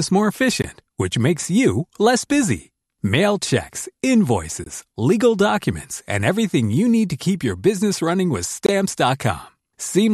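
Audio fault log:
0.62 s, 4.64–4.66 s and 8.66–8.69 s: gap at a join of encoded pieces. Brief dropouts of about 19 to 23 ms cut into the speech every 4 s, just before "which makes you less", just before "legal documents and everything", and just after "your business running with". Their edges are smeared by the codec, and each time the speech resumes exactly where it stopped. Separately encoded pieces were joined untrimmed, leaving each encoder's start-up delay and final-frame padding in place as silence.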